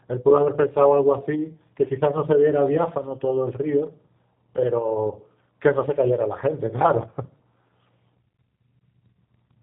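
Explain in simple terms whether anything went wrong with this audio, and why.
The speech sounds muffled, slightly rough and a little robotic from start to finish. That comes from the G.729 codec, a phone-call compression scheme that discards everything above 4 kHz and rebuilds the speech from a simplified model of the voice.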